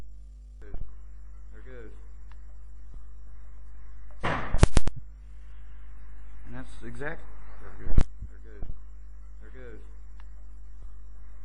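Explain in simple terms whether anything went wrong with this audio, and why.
A steady low 50 Hz buzz runs under the whole clip. This is mains hum, power-line interference that stays constant rather than coming and going.

Lost LE Audio frames cause brief hiccups at 4.96–4.99 s and 8.20–8.25 s. The Bluetooth decoder fills the gaps with a noisy smear, not silence or a click.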